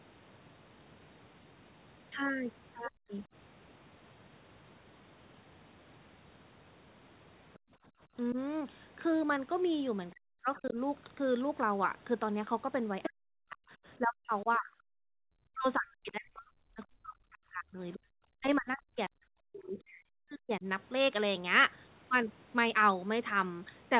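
Speech, band-limited to telephone width with nothing above 4 kHz, which fits a G.711-style call codec, and marred by speech suppressed in double talk. The talker dips by roughly 30 dB for about a tenth of a second between 2.88 and 3.11 s, barely sags by about 5 dB at 8.33 s, drops by about 40 dB across much of 10.12 to 10.77 s, and from 13.09 to 20.66 s is pulled down by up to about 40 dB for some five seconds in total. The likely cause is the echo canceller facing both parties talking at once: unable to tell the local voice from loudspeaker echo, it attenuated everything. Background gated by the echo canceller appears as the room tone falling away by about 36 dB from 7.59 to 8.01 s and by about 37 dB from 14.98 to 15.21 s, then springing back. Here the canceller clamped the microphone hard while the loudspeaker played and released it once it let go. The other side's voice leaking through shows up as a faint scrap about 25 dB under the talker between 10.56 and 10.73 s, and as a brief burst at 13.03 to 13.10 s only about 5 dB below the talker. 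This is likely loudspeaker playback reaching the microphone, with the canceller failing to subtract all of it before it entered the outgoing signal.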